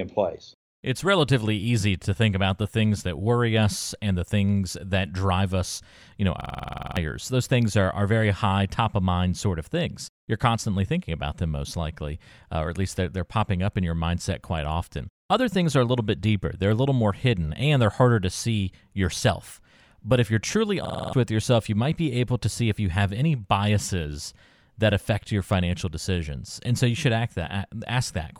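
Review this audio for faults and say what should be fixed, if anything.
A system hang loop hits twice in this speech: 6.41 to 6.97 s after "drive us you know", and 20.85 to 21.13 s between "if you're truly" and "with yourself you might." Each time, a 46 ms slice repeats as a 21.5 Hz rattle, which fits a 2048-sample buffer replaying while the driver stalled. Worth fixing: re-record or patch those spots, and prevent it by giving the audio thread real-time priority so the system can't starve it mid-recording.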